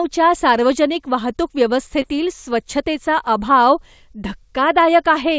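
Between 2.02 and 2.05 s, just after "सार्वजनिक वाहतूक" and before "स्वच्छतेचा अभाव", there is a short concealed packet loss. About 20 ms of the call arrived too late to decode, and the receiver covered roughly 16 ms of that gap by extending the preceding sound before blending back into the real signal, which is heard as a brief smear. On a spectrogram that instant shows nothing above 8 kHz, as throughout this G.722 call.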